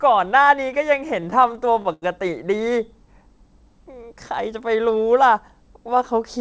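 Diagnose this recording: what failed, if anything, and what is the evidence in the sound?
Repeated stalls (stutter), 1.20 to 2.04 s, at the network and jitter-buffer stage: the speech hitches eight times, holding for 192 ms in total, the longest hold 89 ms. Late packets emptied the buffer each time, and the receiver prolonged the last sound until data resumed, so nothing is lost.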